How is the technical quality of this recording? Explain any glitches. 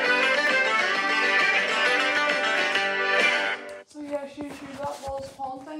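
Two brief glitches affect the recording. At 0.47 s and 2.17 s the sound skips ahead by a few milliseconds, likely a dropped buffer (overrun): unread samples were overwritten, and the surrounding audio joins directly.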